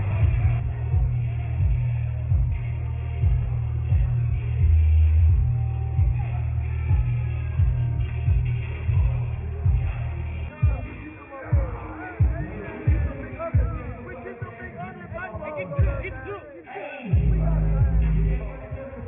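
Nothing here trips the ear, with no dropouts, glitches or other technical faults turning up anywhere along the way.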